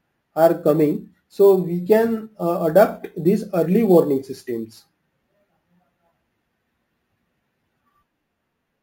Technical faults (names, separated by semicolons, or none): imaging from sample-and-hold upsampling